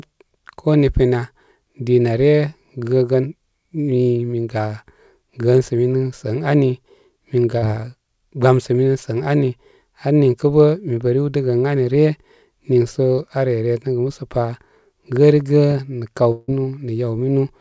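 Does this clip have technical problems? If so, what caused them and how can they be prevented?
Yes. Two short concealed packet losses and one longer dropout are audible in this speech clip, which was carried over a call path whose audio stops at 8 kHz, consistent with a wideband call codec such as G.722.

Short concealed packet loss occurs at 7.58 to 7.64 s and at 13.16 to 13.20 s, just before "aare resəgə musəpa". About 40 ms and 20 ms of audio failed to reach the decoder in time. The receiver bridged each gap by extending the preceding sound and blending back in, which produces a brief smear or wobble. Forward error correction and a slightly deeper jitter buffer would recover or absorb gaps this short.

A long network dropout spans 16.32 to 16.50 s, right after "gərigə nə kaw". About 160 ms of audio is missing, most likely because a burst of packets was lost in transit. The receiver stretched the last sound across the gap, where it becomes a fading buzz or hiss, and then the audio resumes with that stretch gone. 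This sets it apart from the short losses, whose filler is too brief to decay noticeably. A more stable connection, for example wired rather than congested wireless, together with redundancy coding for loss bursts, would help prevent this.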